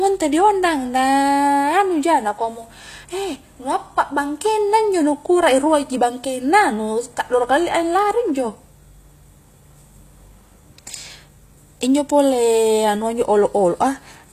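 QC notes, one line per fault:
Throughout, HE-AAC compression: the sibilants sound gritty and metallic, with a lispy edge on s sounds, and the top end is synthetic. Nothing is present above 14.9 kHz. The likely cause is HE-AAC coding at a low rate, which fits roughly 24 kbps. The codec carries only the lower spectrum and fills the treble with shifted copies of lower bands, so the upper harmonics do not line up with those below.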